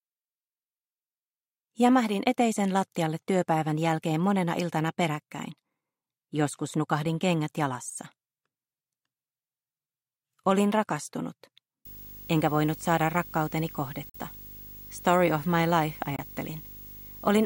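From 11.85 s to the end, a video or display buzz comes in. A screen or its cable is leaking into the audio path. The buzz sits at 50 Hz, the picture's field rate, with a grainy hash above it. A thin, very high tone at 15.6 kHz rides on top, matching the display's line rate. It stays well below the main sound, roughly 20 dB down, but it is steady and never lets up.

Two short holes break the sound inside that buzzy stretch. The first runs from 14.09 to 14.16 s. The second runs from 16.16 to 16.20 s. Both drop the sound to silence. When the sound comes back, it has moved on, as if it kept playing during the gap. The likely cause is a Bluetooth dropout. Packets missed their deadline for the headphones and were thrown away. The lost audio fits about 46 ms in the first gap and about 23 ms in the second.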